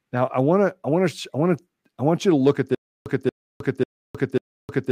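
At 2.75 s the speech turns into a stutter with silent gaps that runs to the end: a 231 ms burst repeats four times, each followed by about 312 ms of silence, every 543 ms. It's likely a stalled stream replaying its last fragment, so the following audio is lost.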